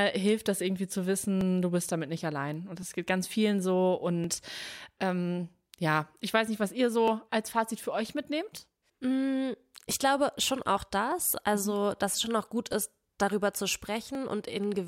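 Two devices on separate clocks, likely about 700 ppm apart, produce clock drift buffer slips. From 1.41 s, just after "das irgendwie zu", to 14.15 s, around 50 samples are dropped or repeated every 1.42 s, heard as about ten regular clicks in the speech.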